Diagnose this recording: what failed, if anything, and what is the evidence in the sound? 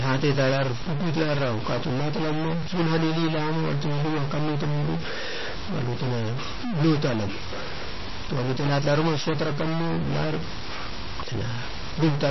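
A distortion rides on the speech from start to finish. The pauses between phrases are not silent. They fill with a steady hiss-like noise. That points to a stuck bit, likely in the converter or the digital lines leading from it. One bit of each sample holds a fixed value. Roughly half the samples land off by that bit's weight, so the error follows the waveform. Near zero, the wrong bit flips with the signal's sign, which makes the noise in the gaps.

The top end stops dead at 5.8 kHz throughout. Nothing sounds above it. Sibilants are dull and metallic. The voice has a watery, swirling quality, and consonant onsets smear. This is MP3 compression, and the damage is plainly audible. The sound fits a low bitrate of about 24 kbps, and the codec stage is the likely source. Short of bits, the encoder cut the treble at a fixed frequency. It dropped weak spectral lines frame by frame, so they flicker in and out.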